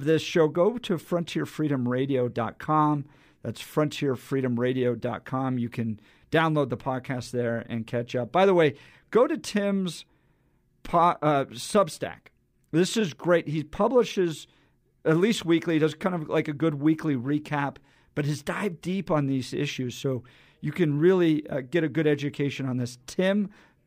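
No technical faults are audible.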